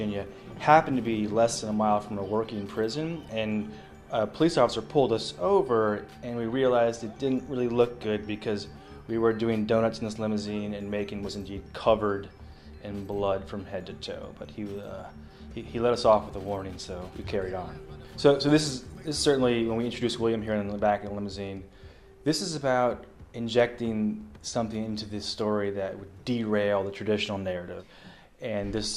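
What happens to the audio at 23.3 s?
Nothing goes wrong at 23.3 s; the audio plays through that moment intact, with no dropout, click, glitch or other audible fault.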